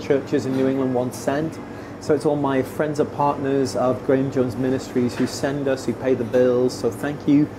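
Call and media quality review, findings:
No audible faults found.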